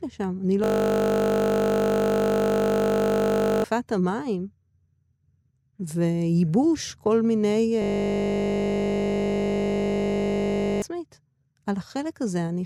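A system hang loop runs from 0.64 to 3.64 s and again from 7.82 to 10.82 s. A frozen computer or driver recycles one 20 ms buffer, giving a steady 50 Hz buzz in place of roughly three seconds of speech each time.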